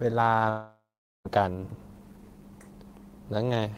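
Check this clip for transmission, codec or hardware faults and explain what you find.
One fault stands out in this speech. Long network dropout, 0.49 to 1.27 s: packets likely stopped arriving for about 760 ms, so the receiver stretched the last sound into a fading buzz, then about 0.42 s of silence, before speech resumes with that stretch missing.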